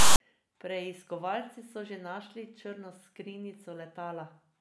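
From 0.00 to 0.20 s the speech is preceded by file tags played as audio: a text metadata block decoded as samples. The characters give a harsh, lopsided rasp with hard edges, and the zero padding after the text drops to dead silence before the speech begins.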